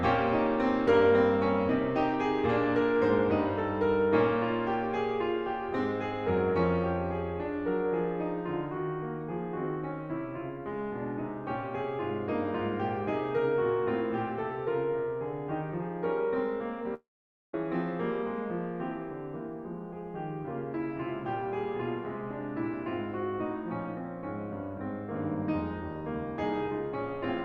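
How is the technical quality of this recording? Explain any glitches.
The music has one break. From 16.94 to 17.54 s, the last sound smears into a fading buzz, then about 0.5 s of silence follows. The music resumes with roughly 0.6 s missing. This is likely a long network dropout. The receiver stretched the final audio it had, ran out, and fell silent until packets returned.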